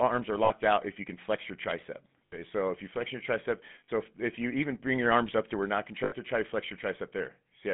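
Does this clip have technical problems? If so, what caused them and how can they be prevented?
Yes. The whole speech clip carries GSM full-rate codec damage, which fits 13 kbps full-rate GSM: a buzzy, gravelly roughness from a vocal-tract model driven by sparse regular pulses, confined to about 150 Hz to 3.5 kHz. Unlike plain band-limiting, the grain sits inside the voice itself. A wideband codec such as AMR-WB or Opus would prevent it.

Lost GSM frames occur at 0.44–0.51 s, 2.26–2.39 s (between "can flex your tricep" and "so if you flex"), 3.84–3.89 s (between "you flex your tricep" and "if if you even") and 6.04–6.13 s (between "up to where not" and "try to flex"). Each gap replays the last good frame, giving a brief metallic ring rather than a click or a silent dropout. Stronger error protection or a better radio link prevents it.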